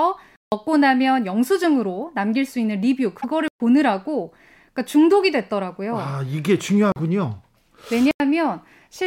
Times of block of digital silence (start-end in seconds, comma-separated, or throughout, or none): 0.36-0.52, 3.48-3.60, 6.92-6.96, 8.11-8.20